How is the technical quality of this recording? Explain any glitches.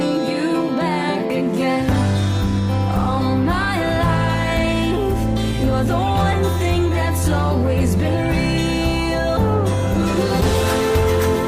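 No technical glitches can be heard anywhere in the recording. Nothing in the audio stands out as a fault at any point.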